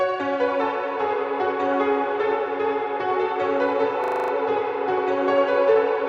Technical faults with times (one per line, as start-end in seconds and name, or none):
4.04-4.32 system hang loop